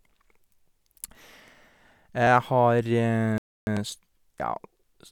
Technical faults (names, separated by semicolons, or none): clock drift buffer slips; Bluetooth stall